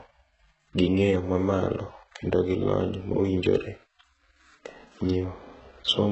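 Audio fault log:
Throughout: likely HE-AAC compression, heavy damage; the treble is copied up from lower bands rather than coded, so s sounds turn gritty, nothing above 8 kHz, fitting about 8 kbps.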